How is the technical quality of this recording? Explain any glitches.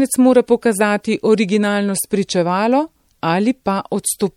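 The recording is plainly degraded by lossy coding that runs the whole length of the speech. The likely cause is MP3 compression at a low bitrate, consistent with roughly 64 kbps. Short of bits, the encoder cuts the treble at a fixed frequency and discards weaker frequency lines, which then flicker in and out between frames. The result is a dull top end with a watery, swirling texture, metallic chirps on s sounds, and smeared consonant attacks.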